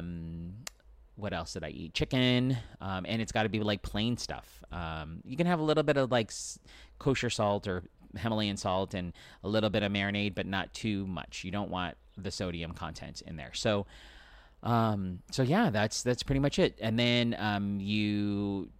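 The speech signal shows no technical faults at any point in the recording.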